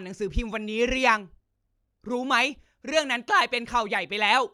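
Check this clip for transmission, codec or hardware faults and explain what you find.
Nothing found on listening: no audible fault anywhere in the speech.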